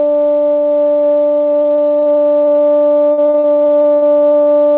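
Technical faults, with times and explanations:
1.52–2.62 s, repeated packet loss (robotic sound): about a dozen brief dropouts, none longer than 24 ms, each patched by stretching the preceding sound. The music stutters, and roughly 15% of the stretch is concealed.
3.12–4.48 s, repeated packet loss (robotic sound): longer holes, up to 84 ms, with about a third of the span filled by repeated sound. The concealment comes through as choppy sound with pieces missing, heard through a call path with nothing above 4 kHz.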